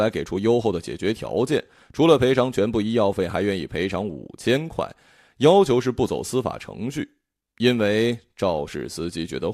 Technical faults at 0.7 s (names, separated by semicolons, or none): none